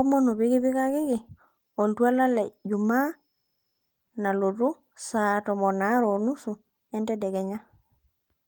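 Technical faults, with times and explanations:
No technical faults turn up in this speech; the Opus voice compression keeps the full audio band and leaves only a light coding trace, consistent with a hybrid mode at around 24 kbps.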